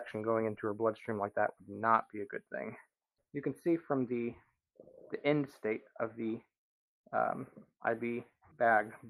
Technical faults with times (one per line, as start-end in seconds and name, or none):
none